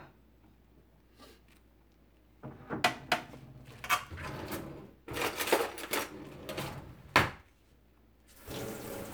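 No technical faults are audible anywhere in this recording of sounds.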